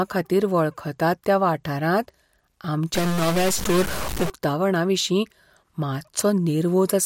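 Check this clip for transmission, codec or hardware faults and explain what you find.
One hardware fault shows up in the speech. From 2.94 to 4.30 s there is distortion, likely a stuck bit shifting about half the samples by a fixed step. The waveform looks stepped and jagged, and the spectrogram shows broadband haze.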